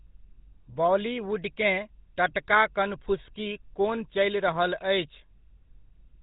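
The speech has passed through the GSM full-rate codec at 13 kbps, which models the vocal tract, drives it with sparse regular pulses, and discards everything above 4 kHz. Throughout, the speech sounds plainly buzzy, gravelly and dull.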